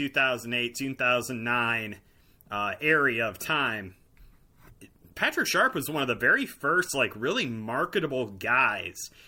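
Nothing in the speech here catches the ear as a technical fault, with no moment anywhere along the way that stands out as something gone wrong.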